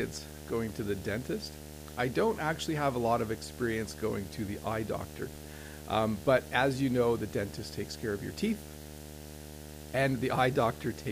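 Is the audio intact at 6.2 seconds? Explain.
No. Video or display buzz runs through the whole clip, including 6.2 seconds. A screen or its cable couples into the audio path. It adds a buzz at the 75 Hz field rate, with hash above it, roughly 15 dB below the speech.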